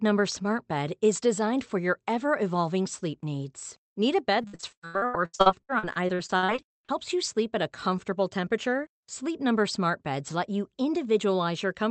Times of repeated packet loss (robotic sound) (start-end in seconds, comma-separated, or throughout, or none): 4.41-6.90